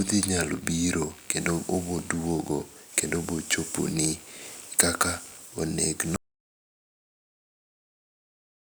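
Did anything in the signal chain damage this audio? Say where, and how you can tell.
Yes, at the analogue wiring stage there's computer activity noise all the way through: a buzzy, chirpy texture pulsing around 70 times a second, sitting roughly 30 dB under the speech. It shifts with the machine's load, not the talker, so processor or graphics current is modulating a shared ground.

Then there's an audio dropout to silence from 6.16 s through to the end. The speech cuts off mid-flow into dead silence, with no room tone at all. That's most likely the input device or its link going away while the recorder kept writing empty samples.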